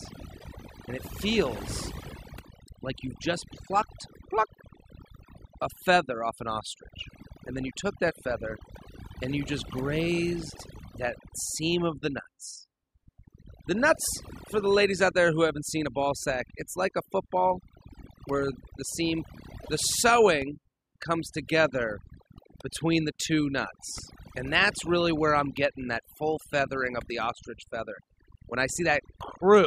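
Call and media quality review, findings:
Overdone noise removal, whole clip: background near-silent with twinkling specks. Over-aggressive spectral gating. Bands near the noise estimate are cut, unlike broadband hiss or codec smearing.

Broken MP3 bit reservoir, 0.38 to 0.44 s and 19.61 to 19.69 s: brief chirp or garbled burst, then the audio jumps ahead. Likely dropped frames leave the next frame reading bytes from another frame. The 56 to 82 ms spans fit two to three 26 ms frames, unlike a plain dropout.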